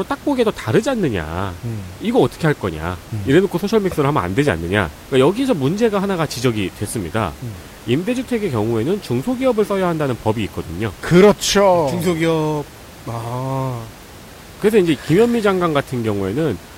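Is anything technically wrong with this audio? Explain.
No, nothing technically wrong.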